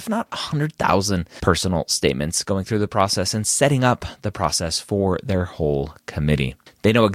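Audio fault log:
6.38 s, corrupt frame decoded: a single compressed frame carrying flipped bits was passed to the decoder and played rather than concealed, just after "process for their whole". Misread codes and wrong gain values placed energy at frequencies unrelated to the speech for roughly the span of that one frame, producing a brief artefact that peaks around -25 dBFS. Because only one frame is affected, the artefact is short rather than a sustained burst of noise.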